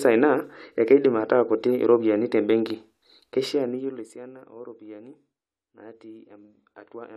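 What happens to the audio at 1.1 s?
At 1.1 s the speech plays through intact, with no dropout, distortion or sudden jump in level.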